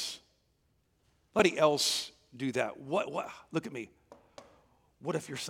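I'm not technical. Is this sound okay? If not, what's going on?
No. At 1.39 s there is a CD skip. The disc player's laser was knocked off its track, or hit a flaw, and landed on another turn of the disc's spiral. The player goes silent for a tiny moment, only a few thousandths of a second, which you hear as a small tick. The speech then carries on from a slightly different spot on the disc, so a bit is either repeated or missing.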